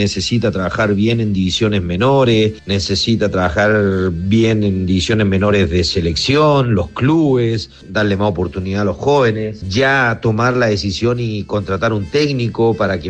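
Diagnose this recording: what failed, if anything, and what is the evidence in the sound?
Nothing failed; no fault is audible anywhere here.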